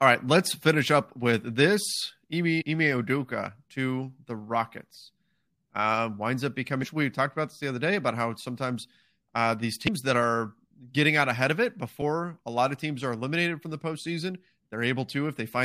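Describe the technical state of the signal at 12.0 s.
At 12.01 s, right after "out ahead of it" and before "a lot of teams", there's a blip from damaged data in the compressed stream. A corrupted stretch of frames throws the decoder out of sync until it finds the next good frame header.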